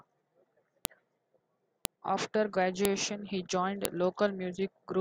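A speech recording marred by a file header played as audio: sharp, loud clicks at 0.85, 1.85, 2.85 and 3.85 s, exactly one second apart. The audio was likely assembled from 1-second WAV pieces joined without stripping their headers, so each header's bytes play as samples regardless of the speech around them. On a waveform each appears as a brief, tall spike; on a spectrogram, as a thin vertical line spanning all frequencies.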